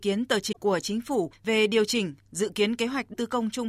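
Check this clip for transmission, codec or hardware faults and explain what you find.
Two short bursts of damaged data in a compressed stream break into the speech, from 0.49 to 0.57 s and from 3.10 to 3.15 s. In each, corrupted bytes leave the decoder misreading frames and losing sync until it finds a valid header, so the sound breaks up briefly. That loss of sync on bad data sets it apart from a plain dropout or packet-loss concealment, which give a gap or a smeared repeat.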